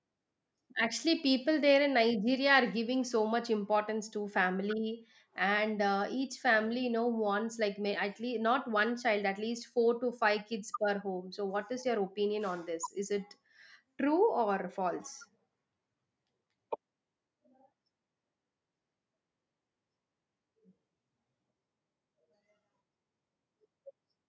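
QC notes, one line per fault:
No faults found; the speech has passed through call microphone processing, which leaves nothing above 8 kHz and thins the lowest bass as expected.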